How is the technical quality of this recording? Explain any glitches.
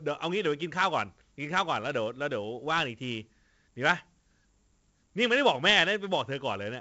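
The recording is heavily compromised by one fault running through the whole speech clip: 4-bit ADPCM compression. Each sample is coded as a coarse 4-bit step from a prediction, so a gritty hiss rides on every loud syllable and attacks crunch where the step lags. Nothing sounds above 7.8 kHz, which, with the grain, points to 64 kbps at 16 kHz. Unlike plain low-bit quantisation, the noise follows the level and drops away in pauses.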